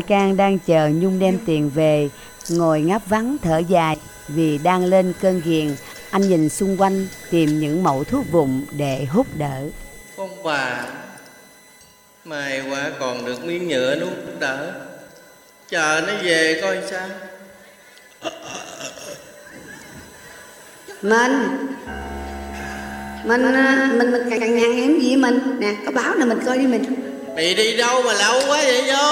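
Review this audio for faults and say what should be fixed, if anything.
Overlapping chunks at 4.17, 14.27 and 24.37 s: the audio moves in 10-second blocks, and each block restarts 100 ms early, so that slice plays twice as a stutter.

Doubled audio track from 22.01 to 24.63 s: an unreverberant copy, a few decibels quieter, trails by about 150 ms and cuts in and out abruptly, likely a second capture path.

To prevent both, align each chunk boundary to exactly where the previous one ended, and make sure only one capture path feeds the mix.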